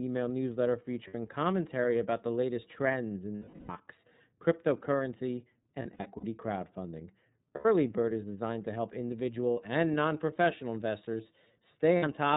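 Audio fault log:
throughout: iLBC codec. The speech passes through a narrowband VoIP codec at 13.33 kbps in 30 ms frames, each coded on its own. Nothing above 4 kHz survives, so the voice sounds dull and boxy, with a plainly audible rough, slightly synthetic edge.
1.07 to 1.15 s, 3.35 to 3.70 s, 5.82 to 6.24 s, 7.55 to 7.65 s, 9.51 to 9.57 s, 11.97 to 12.06 s: lost iLBC frames. Missing packets leave the decoder holding the last pitch cycle with added noise, so each gap becomes a stretched, buzzy vowel. The gaps are 60 ms after "email newsletter", 330 ms after "the latest trends in" (fading as it goes), 180 ms spread over 420 ms at 5.82 s, 90 ms at 7.55 s, and 60 ms after "is designed to help". The last is 60 ms spread over 210 ms. Because frames stand alone, the voice recovers almost immediately after each.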